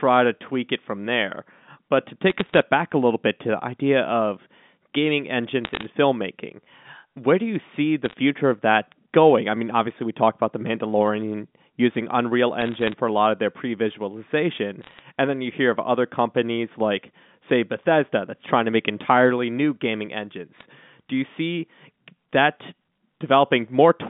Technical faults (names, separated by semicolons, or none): bit errors on a digital phone line